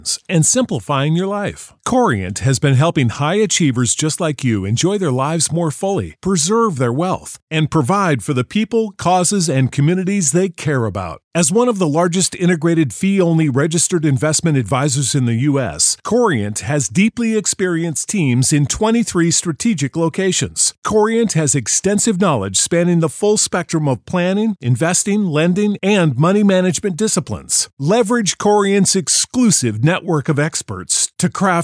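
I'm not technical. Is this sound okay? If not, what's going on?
Yes, no faults are audible in this speech recording.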